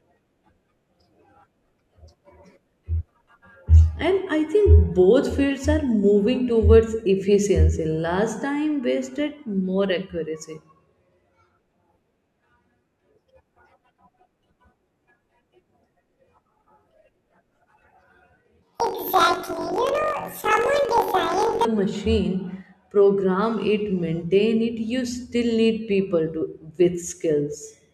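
From 18.62 to 21.66 s, just before "machine program it maintain", planar audio read as interleaved: each 21.33 ms block, which fits 1024 samples, plays left then right at double speed. The speech jumps an octave with a flutter near 46.9 Hz, yet keeps its normal pace, unlike a plain sample-rate error.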